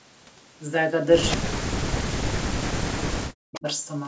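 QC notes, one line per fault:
1.30–1.37 s and 3.54–3.60 s, echo leak: brief faint repeats of the speech trail the original by 212 ms, at about 15 dB and then about 20 dB below it. The likely cause is a loudspeaker's echo canceller letting part of the pickup escape and return.
1.36–3.67 s, speech suppressed in double talk: the voice repeatedly dips and drops out in pieces, about two seconds in all, falling by roughly 40 dB at its deepest. Likely an echo canceller that was confused by simultaneous talk and attenuated the talker along with the echo.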